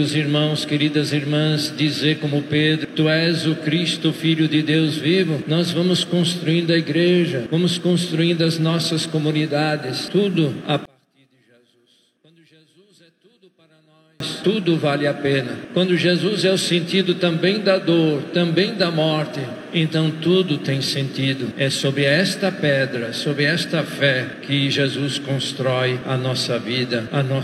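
From 10.85 to 14.20 s the sound drops about 35 dB to a faint residue, likely one channel inverted cancelling in mono, not a dropout's full silence.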